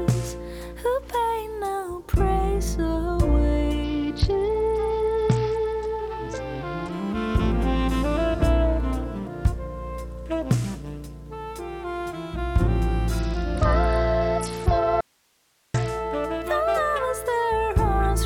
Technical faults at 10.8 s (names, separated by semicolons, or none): none